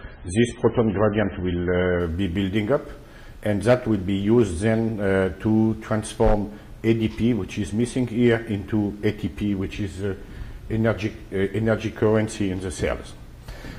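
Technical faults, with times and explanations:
0.0 to 2.0 s, adaptive stream starting at a low bitrate: the player opens on a heavily compressed version with nothing above 9.5 kHz and smeared artefacts, consistent with about 16 kbit/s MP3, then switches without a gap to a cleaner one near 128 kbit/s. Unlike a mid-stream dip, quality only rises.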